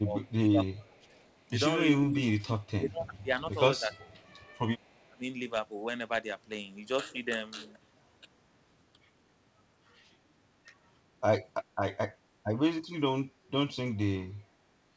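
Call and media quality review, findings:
Speech suppressed in double talk: speech dips and cuts out in pieces, about 2 s in total across 0.0–5.24 s, deepest about 25 dB down; a brief, slight dip of about 5 dB at 8.21–8.26 s; about 20 dB down at 12.83–13.27 s. Likely cause is the echo canceller, which attenuated the near talker while both sides spoke.

Echo leak: a faint delayed copy of the voice trails by 360 ms at 0.26–1.25 s (about 35 dB below speech) and 2.62–5.06 s (about 40 dB below). The likely cause is a loudspeaker whose echo canceller left some residual echo and sent it back. The G.722 call path at 64 kbps caps the band at 8 kHz.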